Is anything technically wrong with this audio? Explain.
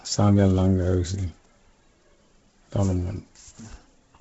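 Yes, there's a clear problem. Throughout the speech you hear heavy Bluetooth LC3 compression artefacts, most likely from the LE Audio link. Nothing comes through above about 7.7 kHz, and the top of what remains sounds breathy and grainy. At a very low bitrate the encoder discards most of the upper spectrum in each frame and fills the gaps with shaped noise. The heavy damage here fits roughly a 16 kbps stream with 10 ms frames.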